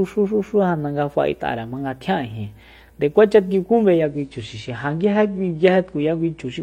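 At 4.02 s the speech switches abruptly to an adaptive stream at a lower bitrate, lasting until the end at 6.63 s. Nothing remains above 9.9 kHz. Codec artefacts thicken. There is no gap. The drop fits a fall from 96 to 32 kbit/s AAC.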